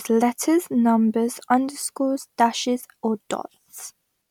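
A short speech recording with nothing technically wrong with it.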